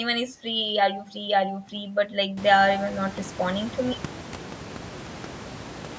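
Nothing here counts as a fault: the speech carries the usual call-microphone shaping with nothing above 8 kHz, and the room's background noise jumps by about 21 dB at around 2.5 s but still sits about 17 dB below the speech.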